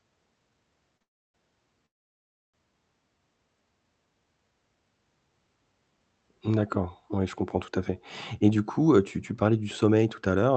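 At 0.97 s a short stall from a late packet holds the sound for about 32 ms: the jitter buffer ran dry, so the receiver stretched the last sound with a slight buzz or dip until the packet arrived. Unlike a dropout, nothing is lost, and it is too brief to become a gap.

Straight after, from 1.03 to 1.36 s, and again from 1.86 to 2.56 s, the sound trails off into silence lasting about 0.31 s and then 0.67 s before resuming exactly where it stopped. This is a call audio freeze, likely from packets held up in transit. It differs from the brief stall in its length and in reaching real silence. It differs from packet loss because no material is skipped.

After "comprends tout à fait", from 8.41 s to the end, a jitter buffer speed-up makes the sound hurried, running at about 108% speed with the pitch unchanged. The receiver cut many tiny pitch-period slices, roughly a fifth of a second in total, to shed the delay built up earlier. 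Unlike a resampling error, the pitch does not rise.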